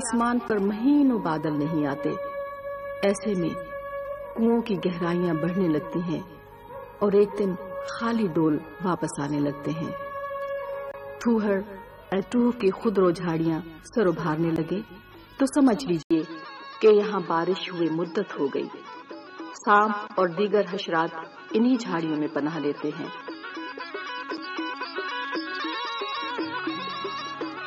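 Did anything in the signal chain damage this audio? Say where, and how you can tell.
Yes, at the input stage: at 16.03 s an 80 ms gap, then a 7.6 kHz ceiling and new noise about 40 dB down. Likely an input switched to a poorer device; codec narrowing brings no fresh noise.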